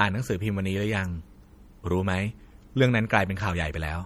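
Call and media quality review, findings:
Watery, swirly texture on speech throughout, sibilants chirpy and metallic, onsets smeared. Likely MP3 compression: a starved encoder zeroing weak frequency lines that flicker frame to frame, consistent with a bitrate near 48 kbps.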